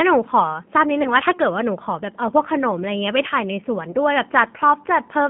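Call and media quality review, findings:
Narrow, slightly rough and synthetic speech throughout, nothing below 150 Hz or above 3.4 kHz. Probable component: G.729 codec, consistent with G.729A at 8 kbit/s. Speech rebuilt from a vocal tract filter, pitch predictor and sparse pulses, with plainly audible damage.

Brief stretched, fading smear then weakened speech at 1.03–1.12 s and 3.91–3.96 s. Probable component: VoIP packet loss concealed by the speech codec. Each gap fits one lost 20 ms packet; decoder extrapolates and fades, recovery trails past the gap.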